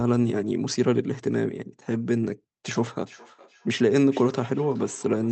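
Feedback echo between two devices from 3.05 s to the end: another device replays the speech into this microphone, repeating it roughly every 0.4 s, about 24 dB quieter.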